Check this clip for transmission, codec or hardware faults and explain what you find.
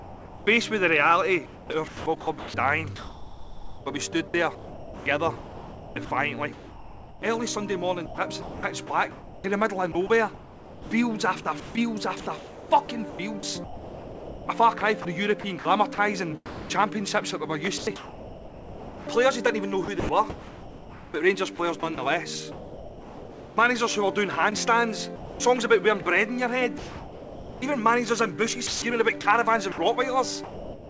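Two voice-detector faults are present, heard against a call-codec band that stops at 8 kHz, which fits G.722.

Sound dropped by the voice detector, 0.00 to 0.47 s: the opening sound is missing and steady synthetic noise fills those 469 ms, with about 290 ms of real sound lost. The likely cause is the sender's detector treating the start as background and sending comfort noise instead.

Sound chopped by the voice detector, at 1.46 to 7.22 s, 8.06 to 16.70 s, 17.78 to 23.57 s, 25.16 to 27.62 s and 28.67 to 30.89 s: the sound turns choppy, with quieter passages cut away. Comfort noise replaces about 3.39 s, 3.3 s, 3.3 s, 1.11 s and 0.70 s of these stretches, likely as the detector repeatedly switches transmission off and on.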